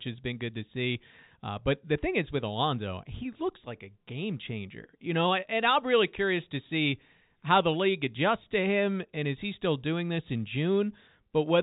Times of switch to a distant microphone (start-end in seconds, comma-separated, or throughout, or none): none